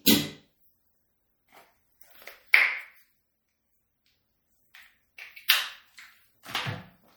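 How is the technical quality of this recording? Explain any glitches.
Technical quality is poor, with plainly audible codec damage throughout and one brief glitch.

Throughout, the sound is watery and swirly with a dulled top end, likely MP3 compression at a low bitrate around 64 kbps. A spectrogram shows a hard treble ceiling and flickering high-frequency patches.

At 5.48 s there is pre-echo: the codec spread its quantisation noise about 17 ms ahead of a sharp attack. The short hiss before the softened onset shows as a smudge preceding the transient.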